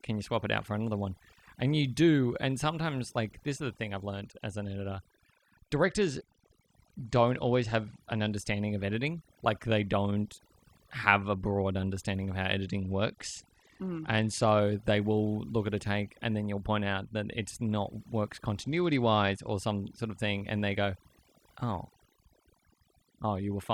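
A speech recording with overdone noise removal throughout: a too-aggressive noise reducer cuts bands near its noise estimate, leaving near-silent, twinkling gaps. A Bluetooth SBC bit pool drop at 5.81–8.34 s, 12.66–14.59 s and 18.61–19.51 s starves the upper sub-bands, dulling the treble and adding grit, which fits a fall from bit pool 31 to 12, around 88 kbps.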